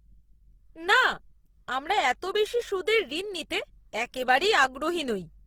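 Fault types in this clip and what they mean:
Opus compression: The speech has a grainy, rough texture throughout, with the voice sounding noisy rather than clean, and the damage is plainly audible. This is likely Opus coding at a low rate, around 16 kbps, in its music-oriented CELT mode. Band energies are kept but filled with folded or noise content. A spectrogram shows energy reaching up to about 20.3 kHz with few empty holes, but the harmonic detail looks smeared and speckled instead of crisp.
DC step: At 1.13 s the waveform's zero line suddenly jumps to a new offset and then relaxes back toward centre. That recovery is the slow decay of a high-pass around 2 Hz. It is heard as a single low thump under the speech, which carries on unchanged. On a waveform the whole trace visibly lifts off its baseline at that instant and drifts back. A spectrogram shows a brief burst of energy at the very bottom.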